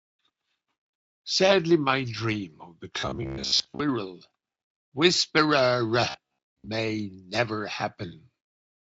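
Audio likely arrived too seldom from 3.00 to 3.80 s and again from 6.10 to 6.68 s, so a roughly 15 ms buffer was replayed in place of most of the skipped speech. Each stretch has robotic sound from repeated short buffers: a rigid metallic buzz at 66.8 Hz that loosely tracks the speech, over a faint Speex coding.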